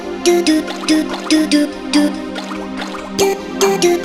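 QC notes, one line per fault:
No faults heard anywhere in the clip.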